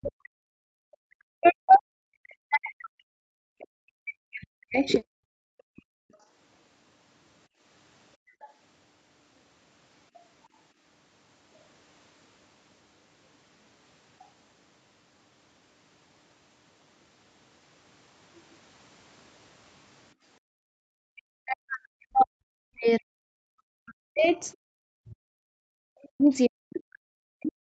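From the start to 1.23 s, and again from 1.4 to 4.9 s, the speech sinks and breaks up. It drops by as much as about 40 dB and cuts out in pieces. This is speech suppressed in double talk. Both sides were likely talking at once. The echo canceller could not tell the talker from the loudspeaker echo, so it turned everything down.

Brief scraps of a second voice follow, from 5.77 to 5.82 s and from 8.42 to 8.47 s. Each lasts about 50 ms. They sit very low, some 35 to 40 dB under the speech. This is the other side's voice leaking through. The far end was likely playing on a loudspeaker, and the echo canceller left a trace of it in the microphone signal.

The suppression returns later, from 20.94 to 23.34 s, from 23.82 to 24.44 s, and from 24.7 s to the end. The speech again drops by up to about 40 dB and comes through chopped. The cause is again likely double talk that the canceller could not separate. 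Through all of this, the call's microphone processing passes nothing above 8 kHz.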